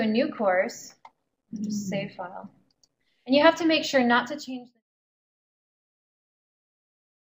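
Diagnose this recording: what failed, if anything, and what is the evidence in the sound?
Nothing failed; no stage shows a fault.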